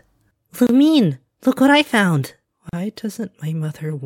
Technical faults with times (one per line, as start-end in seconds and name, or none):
0.67-0.69 gap at a join of encoded pieces
2.69-2.73 gap at a join of encoded pieces